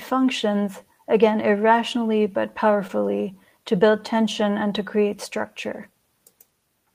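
A speech clip with a brief smear and wobble between 2.87 and 3.00 s, where the sound seems to stretch for a moment before settling back. This is short concealed packet loss: about 20 ms of the call arrived too late to decode, and the receiver covered the gap with roughly 15 ms of synthesized continuation, extending the preceding sound before blending into the real audio, which adds around 10 ms to the timing.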